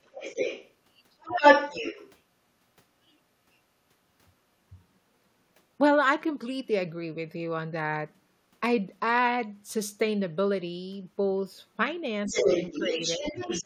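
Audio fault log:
0.04–0.73 s, 1.2–2.1 s, 12.25–13.65 s: other side's voice leaking through. A second voice comes through with the talker. It is about 5 dB below, then about 5 dB above, then roughly level. The echo canceller likely left loudspeaker sound in the microphone.
12.29–12.46 s, 12.74–12.98 s, 13.17–13.24 s: speech suppressed in double talk. The talker's voice dips briefly while the leaked voice plays. Drops are about 5 dB, then about 10 dB at the last. Both sides likely talked at once, so the canceller turned the talker's voice down.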